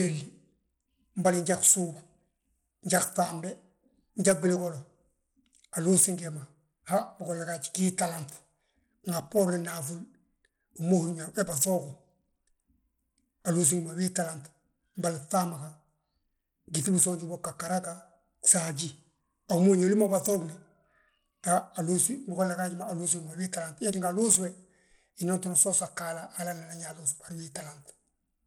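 From start to finish the speech carries plainly audible codec damage, most likely Bluetooth SBC compression. The top end is thin and unsteady, with a gritty, grainy layer riding on the voice and an aliasing edge. That's what you get when the encoder's few bits go to the stronger lower bands and the weaker upper ones are starved and coarsely quantised. The grit points to a tight bitrate, about 96 kbps, even though the bandwidth reaches up to 20.2 kHz.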